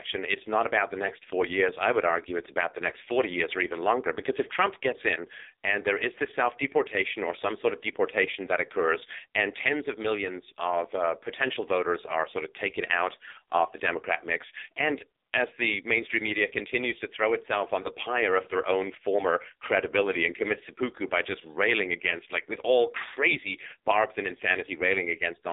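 Throughout the speech, an AMR narrowband mobile codec is at work. Nothing above 3.8 kHz survives, and the low end thins below 300 Hz. Unlike plain telephone-line filtering, the voice also carries a heavy buzzy, synthetic texture, which fits a low mode near 5.9 kbps.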